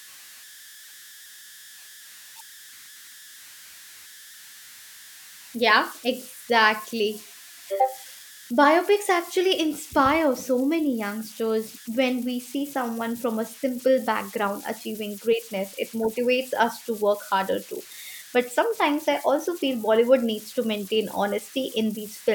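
Converter idle tones run throughout the speech, from start to finish. The delta-sigma converter works without dither, so whenever its input sits near silence it settles into repeating bit patterns instead of random noise. Those patterns produce a tone around 1.5 kHz, heard as whistles, buzzy chirps or rough hiss in the pauses, and a grainy texture beneath quieter passages, sitting about 22 dB below the signal, with its pitch set by the input's small offset.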